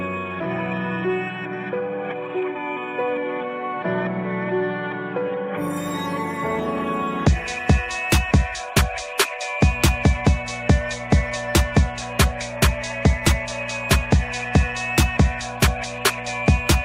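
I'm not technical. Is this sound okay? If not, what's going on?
No. From about 9.70 s to the end, the power supply leaks into the audio as mains hum: a steady, fairly loud low 60 Hz drone under the sound.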